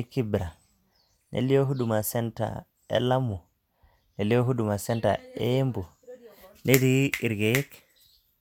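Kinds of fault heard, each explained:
No kinds of fault are heard in this speech.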